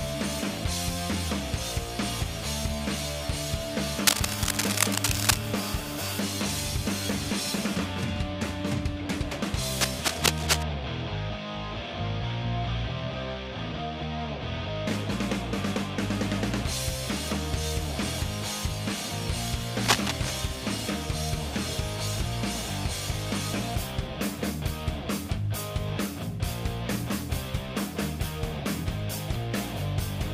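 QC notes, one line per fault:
4.06–5.40 s, 9.76–10.63 s and 19.76–20.39 s, cable scratch noise: likely a worn cable, connector or control being moved, its contact resistance fluctuating rapidly, which injects dense, ragged noise bursts roughly as loud as the sound itself, heard as brief scratching or rustling.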